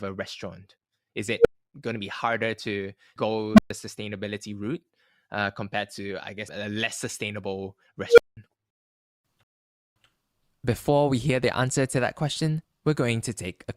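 An unstable filter bursts at 1.39 s before "going to", at 3.54 s before "sustainability route uh compared", and at 8.08 s after "guess a less sustainable". Each is a runaway recursive filter: a tone of roughly 500, 200 and 500 Hz swells over 55, 46 and 94 ms, clips, then overflows into silences of 96, 123 and 192 ms. The squeal that comes before each silence sets these apart from a plain dropout.

A rebuffering stall follows at 9.43 s, where the player runs short of downloaded data and falls silent for 0.53 s. The audio then picks up exactly where it halted, so no sound is lost and time is only added. That seamless resumption, with no tone before the gap, marks it as a stall rather than a filter blow-up.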